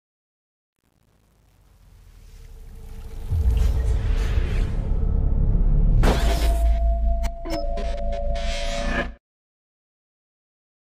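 Right from the start, the fade-in up to about 3.61 s carries truncation distortion. The gain stage driving that fade was only keeping around 9 bits with no dither, so while the level is still tiny the waveform gets chopped into a handful of coarse square steps. You hear it worst over the first 2.8 s or so, where the rising sound is gritty before the fade-in itself smooths out into full level.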